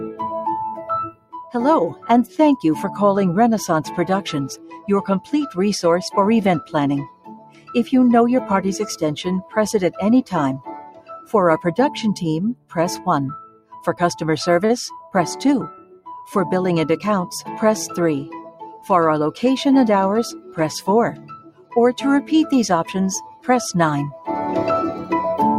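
The audio pumps and thins throughout. Sustained parts and decaying tails keep sinking while sharper onsets punch through, so the level swings by around 10 dB from moment to moment. This is a noise suppressor applied to music or sounds: a speech-oriented suppressor has been left in the chain, and it treats steady, non-speech content as noise and keeps pulling it down. The worst passages are where the sound is cut by the noise suppressor, with sustained material dropping sharply and tails cut short. This happens from 0.79 to 2.39 s (down about 18 dB at its deepest), 4.56 to 7.72 s (about 16 dB), 9.42 to 16.07 s (about 18 dB), 18.49 to 18.88 s (a milder dip of about 8 dB) and 20.40 to 24.28 s (about 17 dB). Within each span only parts of the sound are hit, adding up to a fraction of a second to a couple of seconds, so it feels like intermittent ducking rather than one continuous fade. Inside the long third span there are also two brief hitches where a sound hangs on a moment too long with a slight buzz or dip: 14.65 to 14.72 s, stretched by 41 ms, and 15.76 to 15.80 s, stretched by 21 ms. 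Each is a short stall from a late packet. The jitter buffer ran dry, the receiver padded by extending the last audio until the data arrived, and playback then resumed where it left off. Nothing is lost, but everything afterwards shifts slightly later.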